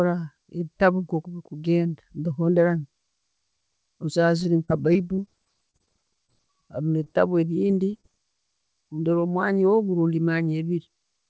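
From 4.40 to 5.89 s the call hits repeated packet loss (robotic sound). Ten separate gaps, the longest 30 ms, leave holes that the receiver patches by extending the preceding audio, about 180 ms of invented sound in all, roughly 12% of the stretch. Because each patch is followed quickly by another, the sound turns choppy, with small pieces dropping out.

Single short concealed packet losses follow at 6.27 to 6.32 s and 7.04 to 7.08 s. Each time about 20 ms of audio failed to arrive. It was bridged by continuing the last sound and then blended back into the real signal, adding a few milliseconds of delay the first time. Each is heard as a brief smear or wobble.

From 7.62 to 8.05 s the repeated packet loss returns. Four gaps, the longest 24 ms, are filled with about 75 ms of concealment, roughly 17% of that span, bringing back the same robotic chop. Throughout, the band stops at 8 kHz, which fits a wideband call codec such as G.722.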